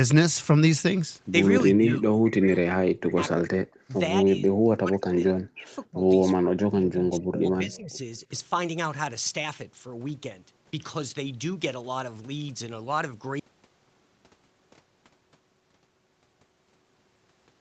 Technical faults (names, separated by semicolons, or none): speech suppressed in double talk; audio dropout to silence